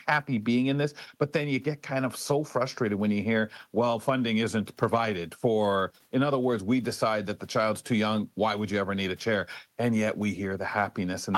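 No technical faults can be heard anywhere in this speech.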